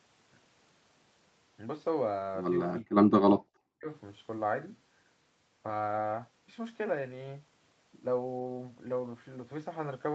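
From 2.82 to 3.89 s the speech gets squashed, dropping by about 40 dB at its deepest for roughly a second. That's likely speech suppressed in double talk: the echo canceller ducked the near talker along with the echo.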